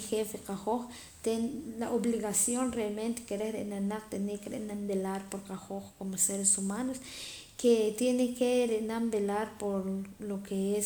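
A speech recording with no audible technical faults.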